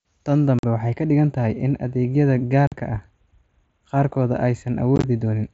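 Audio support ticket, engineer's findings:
Channel delay (comb filtering), 0.48 s to end: hollow speech with a fixed notch around 5 kHz. One channel arrives roughly a tenth of a millisecond late, a few samples, and the mono sum cancels evenly spaced frequencies.

Unconcealed Bluetooth headset packet loss, 0.59–0.64 s, 2.67–2.72 s and 4.96–5.04 s: abrupt holes in the speech, about 45 ms missing each time. This fits a run of several lost frames between headset and phone, filled with silence instead of being concealed. The last event is broken up across about 75 ms, with no single gap longer than 15 ms, which makes it sound choppy. The mSBC link itself passes wideband speech with light graininess.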